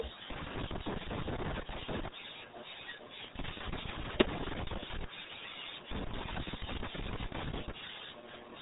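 From start to finish the speech carries RealAudio 14.4 codec damage: everything above 3.8 kHz is gone, and the heavy coding leaves a muffled, gargling quality that fits a dial-up speech codec running at about 8 kbit/s. The harsh, bubbly texture is what separates it from a simple telephone-style band limit, which dulls the sound without smearing it. The codec models speech crudely, frame by frame, and rebuilds it coarsely.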